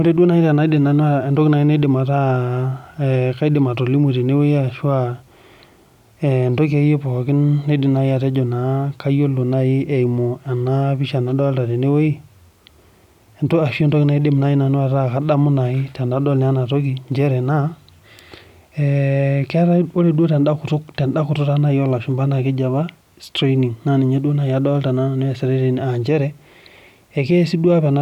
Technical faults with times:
17.12 dropped samples
22.11 dropped samples

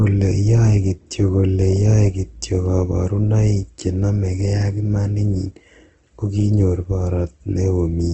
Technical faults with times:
0.00-8.14 Opus compression

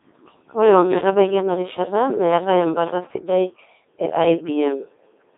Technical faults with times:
0.00-5.37 Codec 2 vocoder

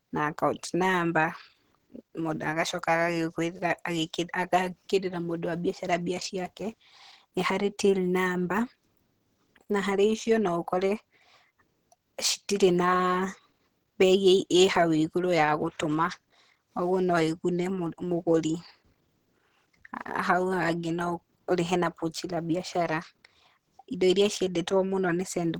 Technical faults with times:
0.00-25.59 Opus compression

